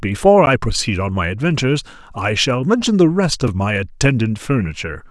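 At 0.46 s and again at 3.48 s the speech drops into a block of digital silence, about 10 ms and 5 ms long, likely where the output buffer went unfilled. The hard cut to silence and back is so short that each is heard as a tick rather than a faded dropout.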